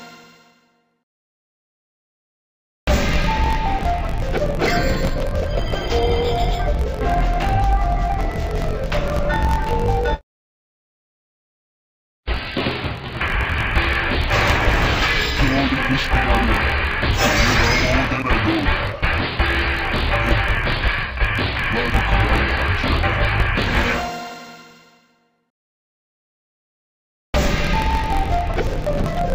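From the first second to the end, the whole clip has interleaved audio read as planar. Each block of about 22 ms holds left and right samples taken in turn, but the first half gets treated as one channel and the second half as the other. Each half then stretches over the full block, so the sound drops a full octave (12 semitones) while the overall pace holds. It comes across dull and robotic, with a steady 45.9 Hz buzz from the block edges.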